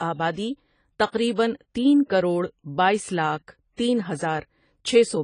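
From start to end, the speech sounds dull and smeared. Nothing reaches above 10 kHz, so the top of the sound is simply missing. Sibilants come out fizzy, and sustained sounds have a watery warble. The damage is plainly audible. This is likely AAC compression, probably AAC-LC. Its frames are coded against a hearing model, and when too few bits are spent, the encoder drops the highs and leaves gaps in the spectrum. The extent of the loss fits a bitrate near 24 kbps.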